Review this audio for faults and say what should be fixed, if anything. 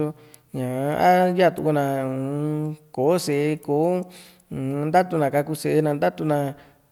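Nothing stood out on listening, so there is nothing here that needs fixing.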